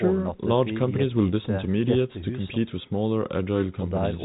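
No faults are audible in the speech; the G.711 telephone coding path is working as intended, with nothing above about 3.8 kHz and at most a faint level-following hiss.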